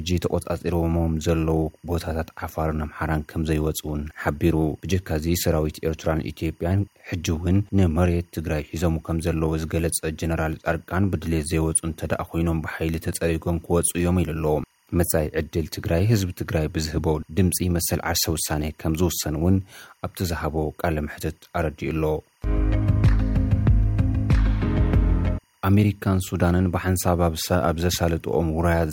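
Timecode bleed runs through the whole clip: a steady chirping warble, roughly 40 dB below the main sound, flipping between about 1 kHz and 2 kHz. The repeating pattern fits 24-frame code leaking from a neighbouring track or cable. Unlike a single-pitch whine, it jumps between two pitches an octave apart.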